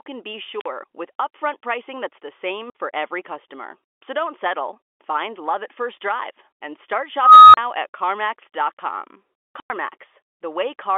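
At 0.56 s an unstable filter runs away: a high squeal near 4 kHz swells over about 46 ms, clips, then drops to about 46 ms of silence. A second unstable filter at 7.20 s builds more slowly, over about 340 ms, into a tone near 1.5 kHz, followed by about 35 ms of silence. The telltale sign is the growing tone before the gap. A plain dropout has no tone.

Packet loss filled with silence chops the speech at 2.70 s for 50 ms and at 9.60 s for 100 ms, both gaps fitting 10 ms packets. These holes open abruptly with hard edges and no tone leading into them.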